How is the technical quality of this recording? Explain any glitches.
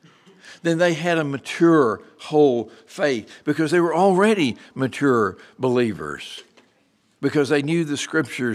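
The recording has no technical faults that can be heard. There are no glitches to explain anywhere in the speech.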